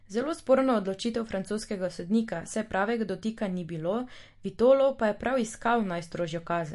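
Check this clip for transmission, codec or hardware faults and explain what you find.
There is one codec fault, running throughout the speech. MP3 compression is the likely cause, audible from start to finish. Nothing is present above 11.3 kHz, where the encoder has cut the treble outright, and weaker frequency lines drop in and out between frames. The damage is plainly audible: sibilants turn metallic and chirpy, the tone has a watery, swirling quality, and consonant onsets smear, which points to a low bitrate of around 48 kbps.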